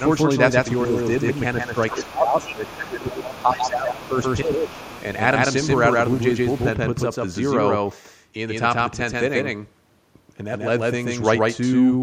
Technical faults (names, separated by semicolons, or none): doubled audio track; other side's voice leaking through; speech suppressed in double talk